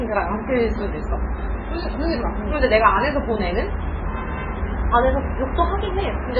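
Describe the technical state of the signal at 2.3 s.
At 2.3 s the sound is watery and swirly, with nothing above 7.1 kHz and faint components flickering in and out. The same damage runs through the whole clip. The likely cause is heavy MP3 compression at a starved bitrate that fits roughly 16 kbps. With so few bits, the encoder chops off the treble at a fixed cutoff and drops weak frequency lines that switch on and off from frame to frame, smearing transients.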